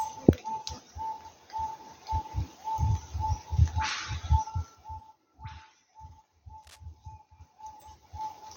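From 4.44 to 5.21 s there's zipper noise. The level drops by about 20 dB, but it goes down in 3 dB steps at roughly seven a second instead of gliding. Each jump puts a small click into the waveform, so you hear a fast ticking riding on the sound for as long as the fade lasts. It's a gain change with no smoothing between steps.

At 6.63 to 6.80 s there's a short burst of cable scratch noise, a rough, uneven rustle sitting only a little below the sound itself. The likely cause is a worn cable, connector or control being moved, with its contact resistance flickering for that moment.

Then from 7.08 to 8.36 s the zipper noise comes back as the level climbs about 20 dB, again in 3 dB steps, now at around five a second. The ticks are slightly more spaced out this time, but it's the same stepped, unsmoothed gain change.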